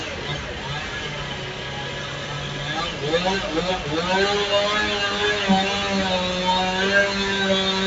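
A noise suppressor tuned for speech stays active across the whole clip of everyday sound. It mistakes sustained tones and ambience for noise and pulls them down by around 5 dB. Sharp onsets pass, but tails sink, so the sound pumps and thins. The call path's top end stops near 8 kHz.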